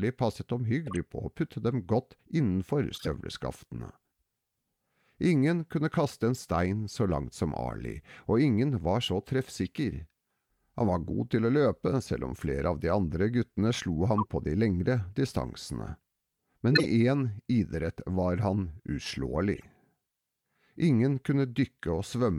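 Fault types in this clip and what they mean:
Corrupt frame decoded: damaged compressed frames got played anyway, so six short chirps and noise blips pop up, the loudest near 16.7 s.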